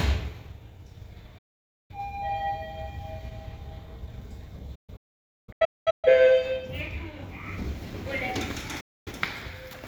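Everyday sound with digital broadcast dropouts: the receiver mutes with a quick fade to clean silence at 1.38 to 1.94 s, in scattered holes from 4.75 to 6.08 s, and at 8.80 to 9.11 s. There are no clicks or repeated fragments, unlike a glitch.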